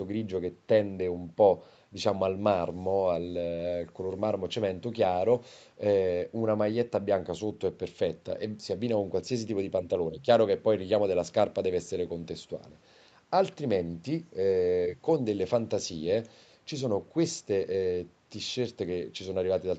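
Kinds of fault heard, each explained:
No faults can be heard in this speech recording. Nothing reaches above about 8 kHz, which fits the call path's codec and microphone processing limiting the bandwidth there.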